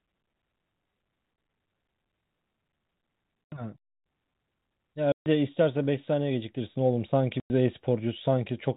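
Short dead gaps cut the speech at 1.36–1.38 s, 3.48–3.52 s, 5.12–5.26 s and 7.40–7.50 s, each with hard edges. This is packet loss filled with silence: lost packets were replaced by nothing. The gap lengths fit whole 20 ms packets, with the band-limited G.711 telephone sound running through it.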